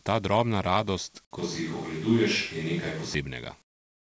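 From 1.39 s to 3.14 s the speech turns roomy and hollow, with thinner bass, as though picked up from across the room. This is most likely a switch to a distant microphone, with the close microphone's signal lost or left out and a farther pickup carrying the audio. The overall level barely moves, but the room noise rises to around 20 dB below the speech. That raised floor and the reverberant tail give the distance away. Both changes are abrupt at each boundary.

From 3.62 s to the end at 4.07 s, about 0.46 s, the natural background gives way to a smooth, featureless hiss, about 26 dB quieter than what preceded it. This fits comfort noise in place of the background. A sender doing discontinuous transmission likely stopped sending during the pause, and the receiver filled the gap with synthetic noise roughly matched to the earlier background. Any detail in the real ambience is gone. Throughout, nothing is present above 8 kHz, which fits a wideband call codec such as G.722.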